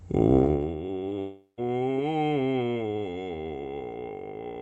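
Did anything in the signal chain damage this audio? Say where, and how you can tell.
Yes. In the processing stage, a level cut of about 20 dB was applied in unsmoothed 1 dB steps, about 40 per second, causing zipper noise ticking from 0.37 to 0.77 s.

On the network side, about 20 ms of the music never arrived around 1.09 s. The decoder's concealment patched it, leaving a short concealed packet loss heard as a brief smear.

From 1.19 to 1.59 s the sound turns into a fading continuation, then near-silence, before resuming with material missing. This is likely a long network dropout.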